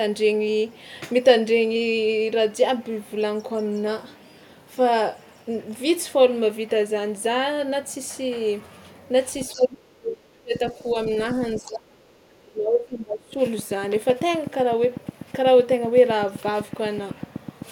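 From 9.41 s to the end of the clip, a train of clicks ticks over the speech and the pauses at a regular rate of about 7.9 per second, peaking roughly 5 dB above the signal. The likely cause is interference from nearby equipment or a faulty connection or power supply. On a spectrogram these appear as evenly spaced thin vertical broadband lines. In the waveform they are sharp spikes of much the same shape.

At 9.52 s, speech suppressed in double talk sets in. The talker's level falls by up to about 30 dB until 10.53 s, then dips again by about 10 dB from 10.74 to 10.97 s, and by about 25 dB from 11.56 to 13.38 s. This is likely the echo canceller ducking the talker while the far end speaks. The waveform envelope sags into near-gaps, and the spectrogram thins there.

Within those dips, the other side's voice leaking through is audible as brief scraps. One scrap runs from 9.54 to 9.65 s at about 20 dB below the speech, and a fainter one runs from 10.83 to 10.91 s at about 35 dB below. 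This is likely loudspeaker echo the canceller failed to remove. On a spectrogram these show as faint, separate harmonic fragments.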